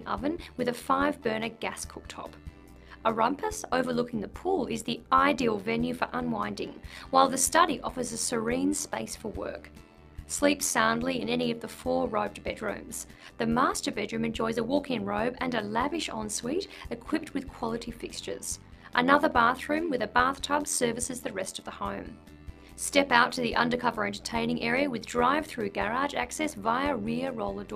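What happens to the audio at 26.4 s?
Overlap-add ripple runs through 26.4 s, as it does across the whole clip. The audio was split into windowed frames and rejoined with overlaps that don't sum to a steady gain, so the level dips by about 11 dB once per frame, around 100 times a second. This is heard as a metallic buzz with extra tones around each note.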